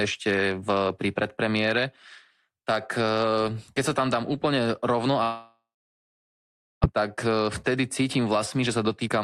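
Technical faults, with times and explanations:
5.23–6.86 s, long network dropout: After "tam dám úplne rovno", a stream of incoming packets likely stopped arriving for a long stretch. The receiver had nothing to play, so it stretched the last sound into a fading buzz, then gave way to about 1.2 s of silence. The gap lasts about 1.6 s in all, and when the speech resumes about 1 s of it is simply gone, with the playback delay having grown by roughly half a second.
6.94–9.24 s, jitter buffer speed-up: Once the delayed audio arrived in a bunch, the jitter buffer was holding more than its target, so the receiver worked the backlog down by repeatedly cutting out short slices one or a few pitch periods long. Across the rest of the clip that trims roughly a fifth of a second, making the speech run at about 109% speed. The pitch stays the same, but the delivery sounds rushed.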